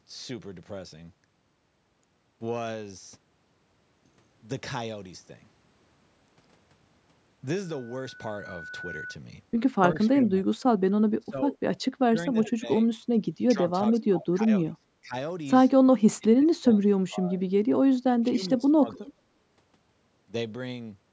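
From 7.63 to 9.19 s a loudspeaker feedback squeal appears: a 1.5 kHz tone swells over about a second and a half to roughly the speech level as the microphone-loudspeaker loop runs away.

Between 10.08 and 19.22 s, at 10.08–10.64, 11.19–11.58, 12.06–12.89, 13.53–15.15, 16.18–17.42 and 18.21–19.22 s, the speech drops by about 20 to 25 dB in patches. This is likely speech suppressed in double talk, with the echo canceller ducking the talker while the far side spoke.

At 19.06–19.12 s a faint echo leak surfaces, a copy of the speech about 25 dB down and delayed 390 ms, likely residual loudspeaker pickup passed back.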